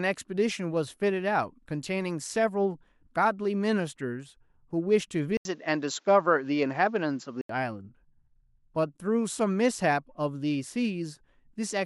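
After an 80 ms gap at 5.37 s, speech turns dull, nothing above 7.6 kHz, until 7.49 s: likely an input switched to a poorer device.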